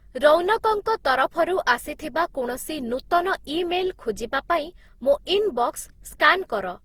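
From start to finish the speech carries generation loss: it sounds swirly and hollow, consonant attacks are smeared, and the texture is rougher than a single encode at this quality would leave. The likely cause is the audio being decoded and re-encoded about seven times, with each pass quantising on a shifted frame grid so noise and holes pile up. The character fits repeated Opus passes at around 48 kbit/s, even though the bandwidth still reaches 20.3 kHz.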